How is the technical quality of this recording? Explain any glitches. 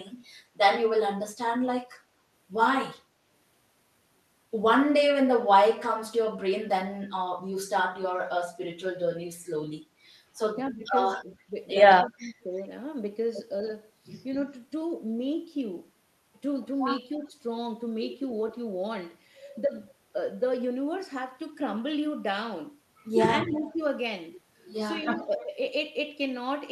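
The recording has two recurring call-processing problems in the speech, each brief.

Speech suppressed in double talk occurs at 10.71–10.82 s, 12.1–12.34 s, 19.64–19.73 s and 23.46–23.5 s. The voice briefly ducks, by roughly 20 dB at its deepest around 12.1 s and only slightly at 23.46 s, each dip lasting from about 40 ms to a fifth of a second. The likely cause is an echo canceller hearing both ends speak at once and turning down the outgoing voice along with what it took for loudspeaker echo.

Echo leak appears at 12.56–12.62 s, 17.19–17.28 s, 23.54–23.77 s and 25.16–25.47 s as a faint, delayed ghost of the voice trailing it by about 301 ms. It is quietest near 17.2 s and most audible in the last two stretches, still well below the direct speech. This is likely a speakerphone whose echo canceller left part of its microphone pickup unremoved and sent it back down the line.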